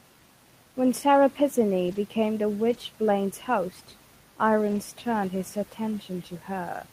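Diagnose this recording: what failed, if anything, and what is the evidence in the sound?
Network packet loss, with each lost packet rebuilt from error correction carried in the next packet. The speech never gaps. Instead it turns briefly rough and noisy at 1.87–1.97 s, 2.69–2.75 s and 4.67–4.77 s, just before "turned his", where low-bitrate copies stand in.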